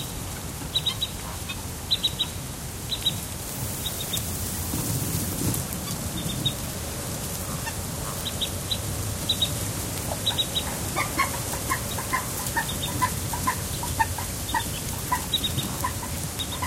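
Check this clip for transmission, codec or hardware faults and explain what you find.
There is one hardware fault. Word clock ticks run from 0.10 s to 16.61 s: an unlocked digital receiver slips one sample about every 70 ms, which fits a clock mismatch of a few hundred ppm. This produces steady, sharp ticks throughout.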